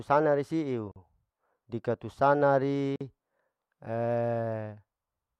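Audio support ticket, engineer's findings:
Gap at a join of encoded pieces, 0.92–0.96 s (about 43 ms) and 2.96–3.01 s (about 48 ms), recurring every 2.0 s. Speech drops to silence, then resumes where it stopped. Points to 2-second segments encoded separately and concatenated untrimmed, so encoder start delay and last-frame padding remain at each join. Waveform: flat dead span with smeared edges. Spectrogram: full-band vertical blank stripe cutting through the speech.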